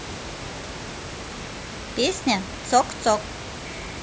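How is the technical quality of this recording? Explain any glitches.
No glitches turn up anywhere in this one; the only thing underneath the speech is a bit of room noise sitting about 12 dB below it, which is just the space the microphone was in.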